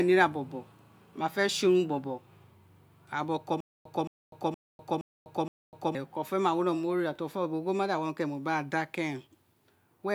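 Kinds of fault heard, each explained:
Stutter with silent gaps: a 220 ms speech fragment repeats five times with 250 ms of silence between, likely a stalled stream replaying its last buffer.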